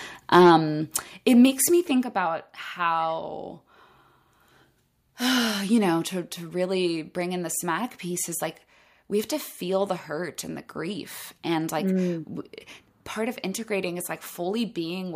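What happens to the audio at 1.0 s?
At 1.02 s the whole level drops by about 4 dB, voice and background together, right before "it makes me think". That's likely a microphone volume stepped down.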